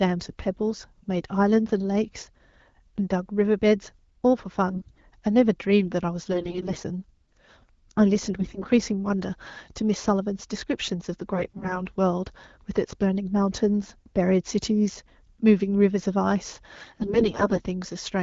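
Five bursts of AMR bit errors break up the speech: 4.70 to 5.03 s, 6.32 to 6.77 s, 8.39 to 8.70 s, 11.34 to 11.81 s, and 16.75 to 17.67 s. Flipped bits slip past the frame check. The excitation pulses land wrongly, and the gain and spectral values drift. Pitch and loudness roughly hold. The sound turns hoarse and gargly. The final burst is longest. Between bursts the wideband AMR coding sounds clean, which fits a rate near 12.65 kbit/s.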